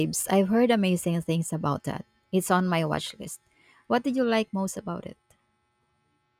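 From 3.04 s, just after "on my", to the end, crude rate conversion sets in: 48 kHz audio converted to 44.1 kHz by linear interpolation without filtering. A gritty, inharmonic fizz, roughly 35 dB down, trails louder, brighter speech. A spectrogram shows faint aliased lines unrelated to the harmonics.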